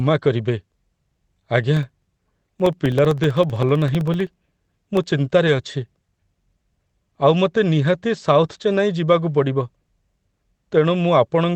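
From 1.77 to 5.1 s the speech carries a steady train of periodic USB or driver dropouts: every 64 ms something stalls the audio driver or bus, and about a millisecond of signal is swapped for silence, giving roughly fifty ticks. Their strict spacing, and the fact that they are heard only while there is sound, separates them from random network glitches or clicks in the recording itself.

At 5.47 to 5.49 s a single 20 ms packet went missing and was rebuilt from the low-bitrate copy that the next packet carried, so this is a lost packet rebuilt from error correction rather than a concealment gap. Nothing drops out. Instead, that brief stretch sounds momentarily grainier and noisier than the Opus call audio around it, which tops out near 8 kHz.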